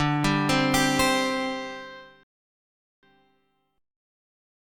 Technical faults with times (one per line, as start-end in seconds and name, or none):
2.23-3.03 rebuffering stall